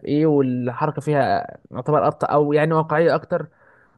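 No technical faults can be heard anywhere in this speech recording.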